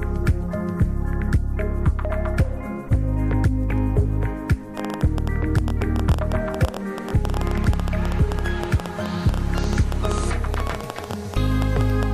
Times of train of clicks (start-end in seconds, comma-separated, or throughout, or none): 4.77-12.04